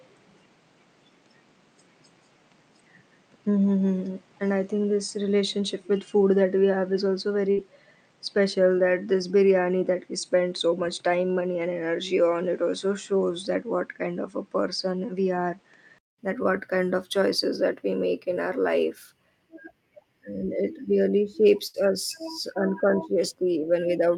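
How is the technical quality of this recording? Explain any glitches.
The recording has two kinds of glitch: a dull first section and two brief dropouts.

Input switched to a poorer device, 0 to 16.18 s: the likely cause is a poorer microphone or headset profile. Nothing above 9.1 kHz gets through, and there is a faint added hiss. After about 200 ms of silence, fuller sound returns before "that what kind of".

Burst of packet loss, at 7.51 to 7.60 s and at 21.67 to 21.81 s after "it really": lost audio was covered by fading held sound, and then about 60 ms is skipped.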